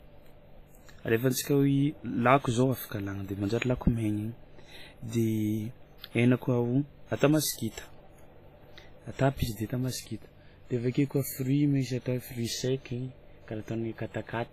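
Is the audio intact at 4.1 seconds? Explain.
No. Throughout the clip, including 4.1 s, the speech has likely been through WMA compression at a low bitrate, fitting about 24 kbps. Its long transform blocks smear quantisation noise and zero weak components, giving heavy ringing, washy hiss that breathes with the speech, and nothing above 14.9 kHz.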